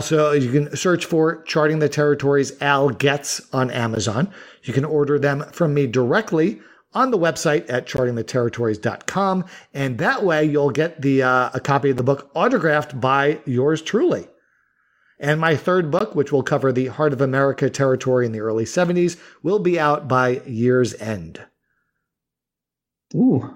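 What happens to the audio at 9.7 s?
Nothing goes wrong at 9.7 s; the speech there is intact, with no dropout, click or distortion.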